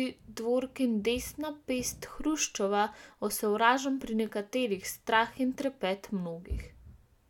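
Speech recording with no audible technical faults.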